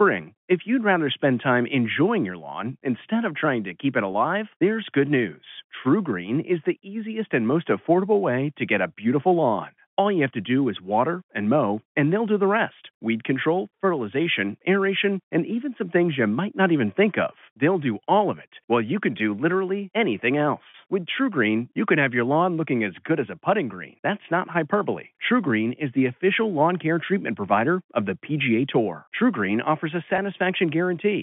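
Speech over a telephone-band line with three spots of packet loss with pitch repetition. At 4.12 s, and again from 30.16 to 30.18 s, about 20 ms of audio goes missing, which fits one dropped packet. The receiver bridges each gap by replaying the last pitch period, so you get a brief held, buzzy blip. The one from 20.70 to 20.74 s covers about 40 ms and drags a little longer before the speech picks back up.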